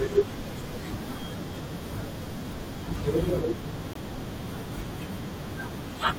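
At 3.92 s the speech drops abruptly into a 42 ms gap of silence, a corrupt frame muted: damaged compressed data was rejected by the decoder and the player substituted silence. The length fits two frames of about 21 ms, and timing stays intact afterward.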